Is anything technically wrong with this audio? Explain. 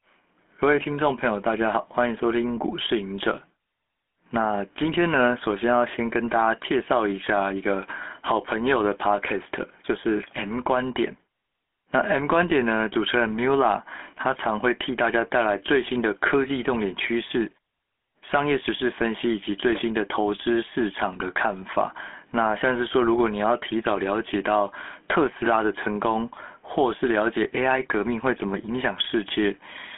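Yes. The speech has a buzzy, gravelly roughness throughout, confined to about 250 Hz to 3.4 kHz with nothing above 3.7 kHz. This is the GSM full-rate codec, which fits a 13 kbps link. It resynthesises speech from a vocal-tract model driven by sparse pulses, which leaves that grit.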